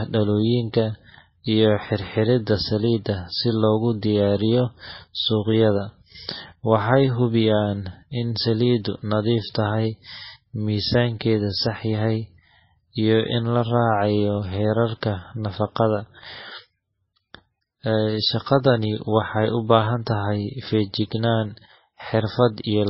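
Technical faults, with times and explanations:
Throughout, MP3 compression. Nothing is heard above 5.6 kHz, so the speech sounds dull and muffled. Heavy watery, swirling artefacts run through it. The likely cause is a low-bitrate MP3 encode, near 17 kbps, which starved quiet frequency lines and cut the treble.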